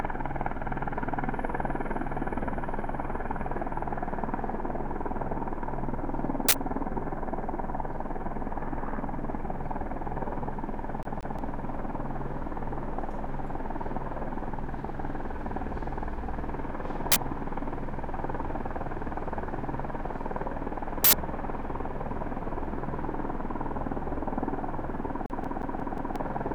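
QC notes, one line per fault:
11.03–11.39 s and 25.26–26.16 s, CD stuck on one turn: the same 0.18 s slice of sound repeats, twice in the first run and five times in the second, each jump marked by a brief mute. A scratch keeps sending the laser back one track at the same point on every turn, giving a fast, even stutter. On the waveform, identical 179 ms blocks sit side by side with tiny gaps. The spectrogram shows the same pattern tiled at a regular interval.
21.04–21.13 s, uninitialised buffer: an 85 ms burst of harsh, loud digital noise cuts in. A block was sent to the output before any audio had been written into it, so leftover memory contents played as samples. The length fits a 4096-sample buffer. On the waveform it is a dense slab with hard edges. The spectrogram shows a bright broadband rectangle spanning the whole frequency range for that short stretch.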